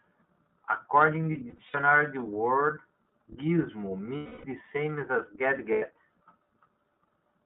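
It's a speech clip that runs the whole way through the iLBC codec. Everything is squeezed into a narrow telephone band of roughly 200 Hz to 3.7 kHz. The voice has that plainly audible rough, slightly synthetic edge you get when each frame's excitation is coded on its own, and the texture fits iLBC's 30 ms, 13.33 kbps mode. On top of that there are three patches of lost iLBC frames. From 1.32 to 1.77 s, about 150 ms of audio goes missing in short dropouts spread over 420 ms, the longest around 70 ms. From 4.17 to 4.45 s there's a solid 270 ms hole, and from 5.72 to 5.85 s a 90 ms one. In each, the decoder fills the gap by repeating the last pitch cycle with noise mixed in, so you hear a held, buzzy or breathy vowel. In the long 4.17 s gap that sound fades as it goes on. Because the frames don't depend on each other, the voice snaps back right after each gap.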